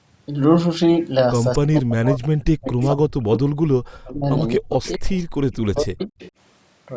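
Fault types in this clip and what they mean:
Speech suppressed in double talk: The speech repeatedly sinks by as much as roughly 40 dB, in stretches from about 1.59 to 6.15 s. This likely happens because the canceller, hearing both sides at once, turned everything down. Unlike packet loss, the dips follow the overlapping talk rather than occurring at random.
Echo leak: Brief repeats of the speech trail the original by about 250 ms, at 2.82, 4.84, 5.52 and 6.19 s. They likely come from loudspeaker sound that the far end's canceller failed to remove. A steady delay like this sets it apart from room reverberation.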